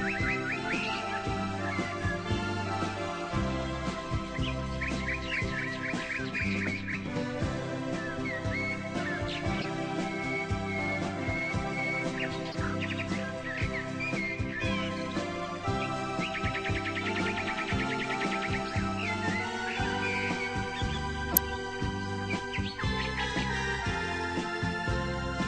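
Three short bursts of corrupt frame decoding interrupt the audio, where damaged compressed data was played instead of being concealed. At 9.61 to 9.65 s a single bad frame gives a brief glitch peaking at about -20 dBFS. At 12.49 to 12.55 s roughly two frames produce a quieter glitch around -25 dBFS. The worst is at 21.31 to 21.39 s, where a few frames put misplaced energy up to about -10 dBFS and 20.3 ms of audio is skipped.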